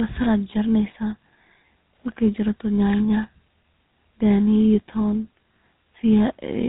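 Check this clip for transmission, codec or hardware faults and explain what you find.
There's one fault, running the whole way through: tandem speech coding. The speech went through CVSD, then G.711 A-law, then GSM full rate, with each coder rebuilding the previous one's damage. That leaves it rough, muffled and warbly, with nothing above 3.8 kHz.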